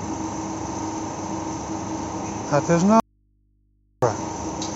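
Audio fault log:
3.00–4.02 s, audio dropout to a faint residue: the speech cuts off abruptly for about 1.02 s, leaving only mains hum around 40 dB below the signal, which likely comes from the input staying live and open while the wanted signal was briefly lost, before returning mid-flow.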